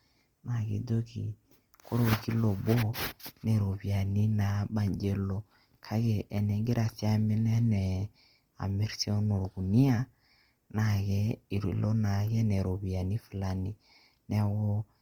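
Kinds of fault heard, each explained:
Opus compression: The speech sounds grainy and rough rather than swirly throughout. This is likely Opus in its CELT music mode at a low rate, which fits roughly 24 kbps. The encoder keeps each band's energy but refills starved bands with folded or noise-like content. A spectrogram shows a full band up to 20.1 kHz with few holes, but the upper range looks smeared and speckled instead of finely detailed.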